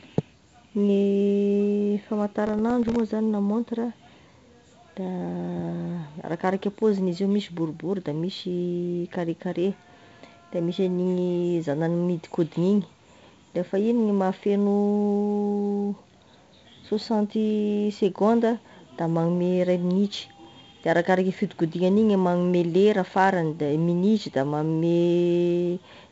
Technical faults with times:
0.00-26.11 4-bit ADPCM compression
2.47-2.99 processor overload crackle
20.44-20.84 processor overload crackle

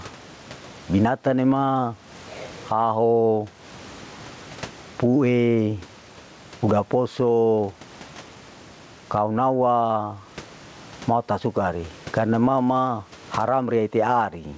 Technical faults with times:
0.00-14.58 gain pumping

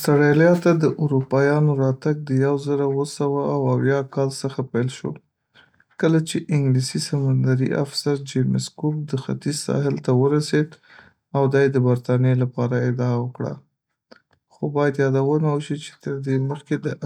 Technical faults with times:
none

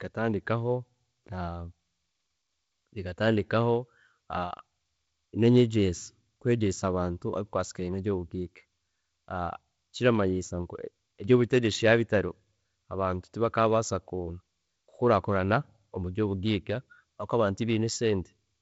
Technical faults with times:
none

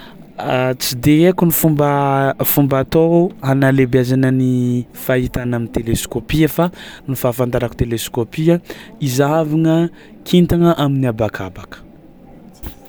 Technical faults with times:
none

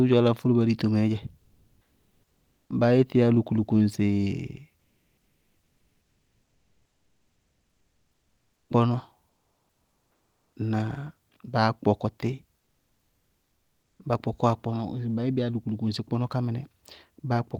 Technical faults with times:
1.45-2.65 comfort noise in place of the background
4.81-8.65 comfort noise in place of the background
9.31-10.51 comfort noise in place of the background

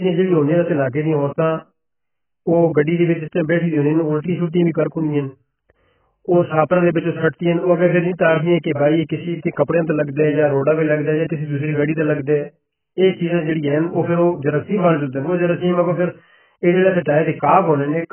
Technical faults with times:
0.00-18.12 AAC compression

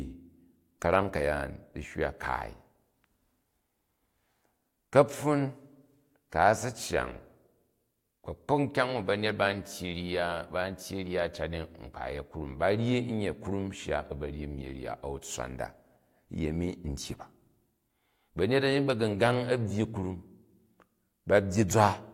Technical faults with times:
none

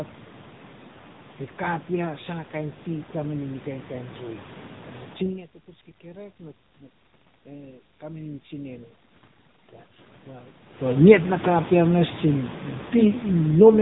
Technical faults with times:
0.00-13.81 AMR narrowband mobile codec

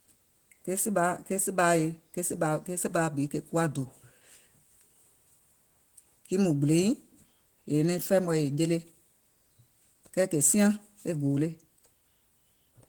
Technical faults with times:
0.00-12.88 Opus voice compression

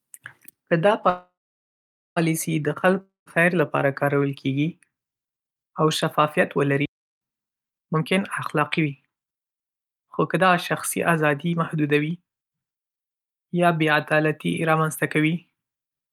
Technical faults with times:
1.09-2.18 call audio freeze
3.01-3.28 long network dropout
6.85-7.21 playback stall
7.86-8.20 jitter buffer speed-up
8.60-12.73 jitter buffer speed-up

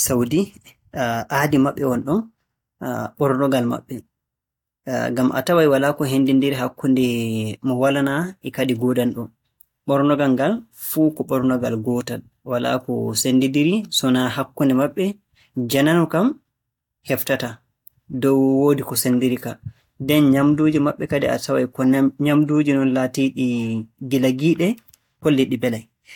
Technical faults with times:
none

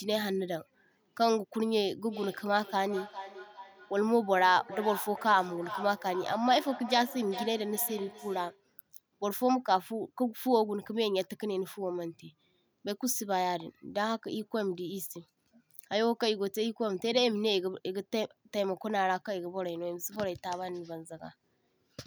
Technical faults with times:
2.07-8.70 feedback echo between two devices

